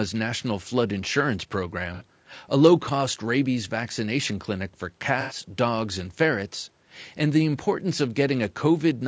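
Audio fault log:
Throughout: low-delay AAC compression, likely AAC-ELD at a low rate, about 32 kbps by the sound of it. The short frames can't resolve the pitch harmonics cleanly, so the speech comes across rough and grainy, with noise filling the gaps between harmonics and a synthetic-sounding top end.
1.94–2.03 s and 5.21–5.36 s: AAC frame loss with concealment, roughly 60 ms gone in the first and 90 ms in the second, which fits two and then three dropped frames. The decoder patches each gap from the last good spectrum, so you get a brief smeared, noisy or phasey blur rather than a dropout to silence.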